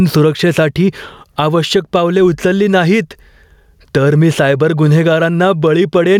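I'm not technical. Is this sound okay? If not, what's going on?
No. The microphone level was likely set far too high, so an automatic volume control keeps pulling it down on every loud moment. That's gain pumping: throughout the speech, loud and soft parts end up closer in level, and everything sounds squashed.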